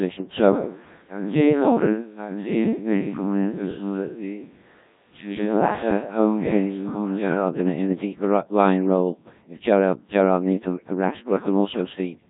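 Codec 2 vocoder damage runs throughout: the speech is rebuilt from pitch and envelope as sine waves, sounding heavily robotic and buzzy, fitting a 1.3 kbit/s mode, with nothing above 3.8 kHz.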